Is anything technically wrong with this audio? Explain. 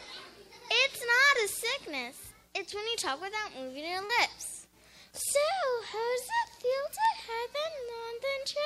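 Yes, there are two separate faults.

From 4.05 to 4.11 s there is a short concealed packet loss. About 40 ms of audio failed to arrive in time. The receiver bridged the gap by extending the preceding sound for roughly 39 ms, then crossfaded back into the real signal. It comes across as a brief smear or wobble. Unlike a click, it follows the character of the surrounding sound, because the filler is modelled on what came just before.

At 7.05 s there is a bit error spike. A flipped bit threw three consecutive samples off by a power of two before they snapped back. The result is a single sharp, broadband tick with no relation to the audio around it. Unlike the concealment at 4.05 s, nothing is smeared or stretched, and the disturbance lasts well under a millisecond.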